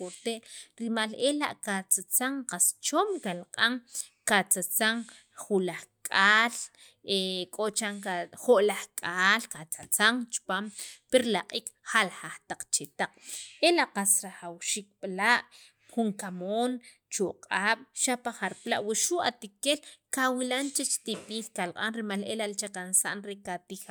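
Listening to the speech recording, nothing technical stood out at any point.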